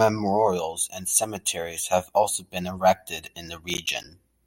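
A gritty burst of crackle in this speech runs from 3.70 to 4.04 s, right after "also been erected in". This is processor overload crackle: several short buffers, around 10 ms each, missed their deadlines and dropped to silence.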